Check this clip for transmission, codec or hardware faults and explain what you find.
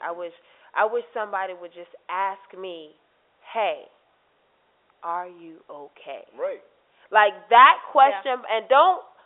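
Nothing here sounds wrong: the speech just has the familiar narrow, slightly boxy character of an ordinary telephone line, with the sound topping out around 3.6 kHz, which is exactly how a normal landline call is supposed to sound.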